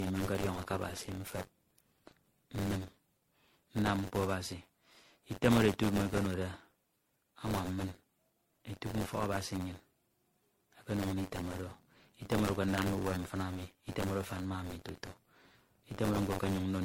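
Buffer tearing runs through the whole recording. The writing side and the hardware reading side of the playback ring buffer have drifted so that they cross inside every period. Roughly a tenth of each buffer therefore carries audio from about 30 ms earlier, spliced in with hard edges. The result is a steady robotic rattle at 93.8 Hz, which fits a 512-sample buffer. It is present wherever there is speech and drops away in the gaps.

Generation loss affects the full length as well. The speech has a swirly, smeared, hollow character, consonant attacks are blurred, and nothing is present above 16.5 kHz. This degradation is heavier than a single encode at the apparent bitrate, around 64 kbit/s MP3, would produce. The likely cause is repeated decoding and re-encoding, something like five passes. Each pass requantises on a shifted frame grid, so noise and spectral holes build up with each generation.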